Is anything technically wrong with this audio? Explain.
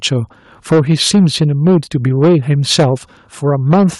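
Yes, there are two faults. There's microphone overload from 0.71 to 1.78 s, 2.06 to 2.86 s and 3.48 to 3.86 s. The peaks run about 7 to 8 dB past the limit, likely from input gain set too high, so the flattened tops give the speech a harsh crackle. There's also a microphone volume step down of about 2 dB at 0.73 s and 3.74 s, a sudden level drop that's likely the call software reacting to that clipping.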